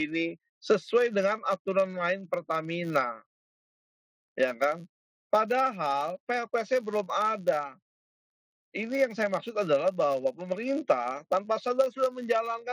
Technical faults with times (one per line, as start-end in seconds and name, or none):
0.00-12.73 filter restarted on every block